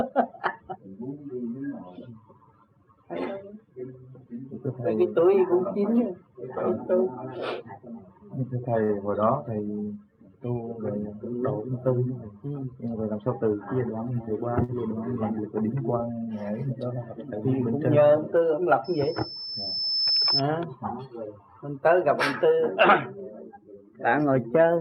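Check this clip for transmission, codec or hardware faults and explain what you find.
Three kinds of fault are present: two short stalls from late packets, one jitter buffer speed-up, and a loudspeaker feedback squeal.

Short stall from a late packet, at 8.83 to 8.92 s and 14.64 to 14.71 s. Each time a packet missed its playout slot and the jitter buffer emptied. The receiver held the last sound for about 56 ms and then 49 ms, and resumed where it left off once the packet arrived. Nothing is lost, but the sound is briefly drawn out, with a faint buzz or dip, and total delay rises by the same amount.

Jitter buffer speed-up, from 12.79 to 13.38 s. The buffer held more audio than its target, so the receiver trimmed many short pitch-period-sized pieces in succession, removing roughly 70 ms. Playback runs at about 110% speed while the pitch stays unchanged. The result is a brief hurried, slightly compressed stretch rather than a pitch shift.

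Loudspeaker feedback squeal, from 18.84 to 20.42 s. A microphone is picking up the loudspeaker it feeds, and the loop gain exceeds one at 5.2 kHz. That frequency reinforces itself over about one and a half seconds, rising to about 5 dB above the wanted audio. It is heard as a single high tone swelling into a squeal.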